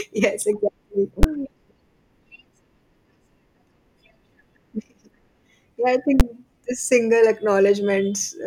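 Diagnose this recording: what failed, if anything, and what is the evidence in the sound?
Invalid numbers at full scale occur twice, as single hard bangs at 1.23 s and 6.20 s, the second just before "this single". Each lasts about 11 ms, which fits a 512-sample processing block. A floating-point calculation upstream produced infinite or undefined values, and the sample-format conversion clamped them to the maximum positive or negative code. The whole block sits flat at one extreme value, far beyond the speech peaks, and because it is so short, its start and end edges merge into one pop.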